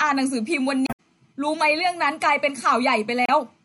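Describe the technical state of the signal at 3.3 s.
At 3.3 s the signal is caught in a burst of damaged data in a compressed stream, running from 3.25 to 3.31 s, about 50 ms. Part of the coded stream there is corrupt. The decoder cannot read those frames cleanly. It loses sync and hunts for the next valid frame header. The result is a short glitch in the speech, breaking the flow for a moment.

Underneath this, the whole clip carries the sound of heavy compression, likely MP3 compression at a low rate that fits a 64 kbps stream. Weak frequency components drop in and out between frames. This gives the speech a watery, swirly texture, with metallic edges on s sounds and softened attacks. The damage is plainly audible at this moment too.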